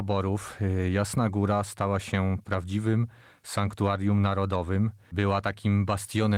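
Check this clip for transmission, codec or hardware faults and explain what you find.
No transmission, codec or hardware fault found; the speech passes through Opus voice compression at 24 kbps in hybrid mode with fullband bandwidth, and the coding damage is light.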